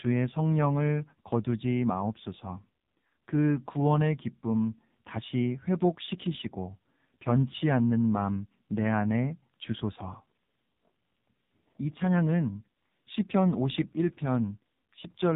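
AMR narrowband mobile codec damage runs through the whole clip from start to finish. The speech has been squeezed through a 2G/3G-style telephone codec that samples at 8 kHz, so nothing above 4 kHz survives and the sound is dull and boxed-in. The voice is rebuilt by a vocal tract model driven by a sparse handful of pulses per frame, leaving a heavily buzzy, synthetic, robotic edge that fits one of the low modes, around 5.9 kbps.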